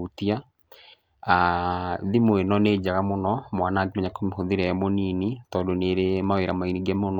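No technical faults can be heard anywhere in the recording; the signal holds steady and intact from its first moment to its last.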